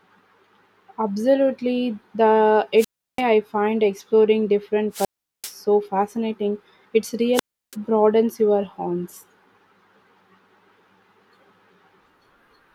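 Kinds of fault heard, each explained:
Wireless microphone squelch dropout: The radio link from the analogue FM microphone weakens until the receiver's squelch shuts the output. Each time, hiss swells and then near silence lasts about a third of a second, at 2.77, 4.91 and 7.33 s, before "I find" and "broadens your horizons".
Repeated buffer: At 4.27 s, just after "I find", fresh audio arrived late, so a roughly 5 ms slice was replayed twice more with hard joins. A slice that short sounds as a quick click or brief buzz, not an audible stutter.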